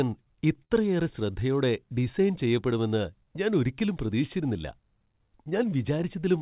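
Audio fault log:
Throughout: clock drift between sender and receiver. The sending device's audio clock runs roughly 4 percent slower than the receiver's, so samples arrive a little more slowly than they are played out. The jitter buffer keeps draining, and the receiver has to make up the shortfall by stretching and repeating small pieces of audio. The result is a faint unevenness in pacing that persists across the whole clip rather than one clean glitch.
0.05–6.21 s: repeated timing corrections. To keep pace with the slow sender, the receiver keeps inserting short repeated or stretched fragments, all in the same direction and at uneven spacing. The net effect is playback at about 97 percent speed, with something like 150 ms added overall. Each edit is tiny, heard only as a slight drag or wobble in tempo. The sound is band-limited with nothing above 4 kHz, which fits a G.711 A-law call at 64 kbps.
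0.65–0.72 s: short stall from a late packet. A packet missed its playout deadline and the jitter buffer ran dry, so the receiver held the preceding sound for 52 ms until the data arrived, then resumed from the same point. No audio is lost, but that moment is briefly prolonged, with a faint buzzy or slightly dipped quality. Playout delay grows by 52 ms from this point on.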